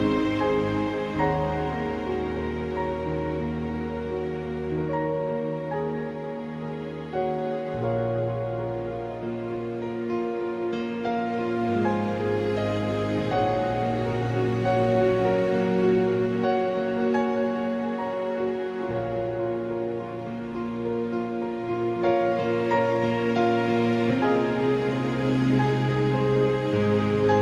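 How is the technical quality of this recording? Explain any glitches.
The technical quality holds up, with no glitches to explain.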